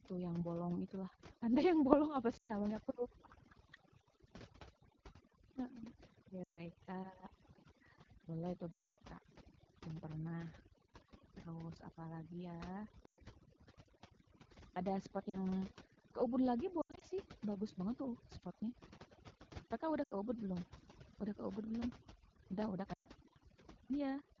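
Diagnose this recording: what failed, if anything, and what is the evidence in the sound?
The background drops to near-silent gaps speckled by twinkling artefacts throughout. This is overdone noise removal at the call-processing stage: a suppressor set too hard is switching off frequency bands near its noise estimate, taking quiet speech detail with them.

A rough, raspy edge runs through the whole clip, with coarse texture and a hissy top end. This points to the AMR wideband (HD Voice) codec at one of its lowest rates, which fits the 8.85 kbit/s mode, where the pulse-driven model lacks bits to code speech cleanly.

Brief dropouts that fall to near silence occur at 2.37 s (0.12 s), 6.43 s (0.14 s), 8.72 s (0.26 s), 13.05 s (0.12 s), 15.29 s (0.04 s), 16.81 s (scattered over 0.2 s), 20.04 s (0.08 s) and 22.93 s (0.12 s). These are lost AMR speech frames on the radio link, with the decoder repeating stale parameters at falling gain.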